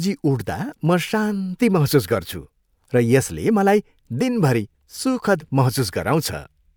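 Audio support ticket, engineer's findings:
No audible fault found in the speech recording. No symptom, time, component or mechanism to log.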